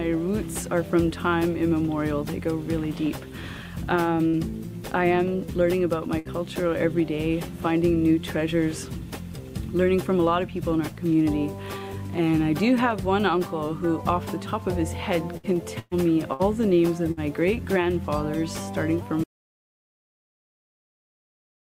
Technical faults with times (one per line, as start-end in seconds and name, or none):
4.27-4.36 burst of packet loss
6.19-6.28 burst of packet loss
15.37-15.46 burst of packet loss
15.79-15.94 burst of packet loss
16.33-16.42 burst of packet loss
17.11-17.20 burst of packet loss
19.24-21.76 audio dropout to silence